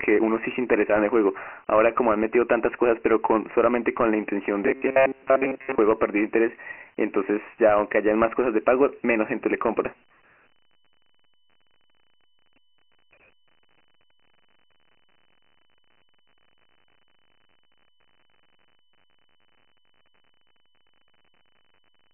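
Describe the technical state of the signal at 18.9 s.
At 18.9 s the speech carries Dialogic VOX ADPCM damage, present for the whole clip. Each sample is stored as a 4-bit step from a running prediction, and the 24 kbps rate fits a 6,000-samples-a-second encoding. Nothing survives above 3.1 kHz, and the low end is thinned below about 300 Hz. The coding is heavy: a gritty hiss rides on the speech and stops between phrases. That speech-tracking grit separates it from plain telephone band-limiting, which narrows the sound without adding noise.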